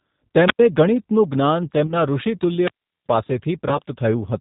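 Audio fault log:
throughout, G.729 codec: everything above 4 kHz is missing and the speech sounds rough and synthetic, typical of an 8 kbit/s coder that rebuilds the voice from a filter and a few pulses rather than storing the waveform.
0.45–0.59 s and 2.60–3.07 s, wireless microphone squelch dropout: a rise of hiss is followed by near silence, about 90 ms and then about 380 ms, as the receiver mutes the failing radio signal. This is near silence, not a decaying tone.
1.87–1.93 s and 3.69–3.79 s, VoIP packet loss concealed by the speech codec: about 20 ms of audio, which fits a single lost packet each time, is replaced by a fading buzzy tone or coloured noise extended from the previous sound. The voice stays weak for a moment afterwards. This differs from the squelch dropouts, which leave silence rather than a synthetic tail.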